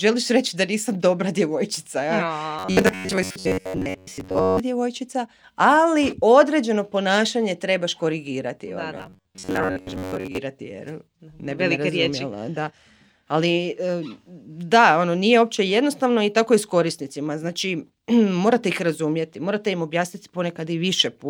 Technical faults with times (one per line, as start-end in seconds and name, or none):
2.59-4.61 robotic sound from repeated short buffers
8.97-10.38 robotic sound from repeated short buffers